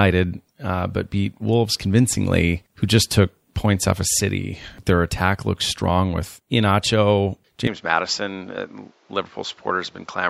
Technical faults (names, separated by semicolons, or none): input switched to a poorer device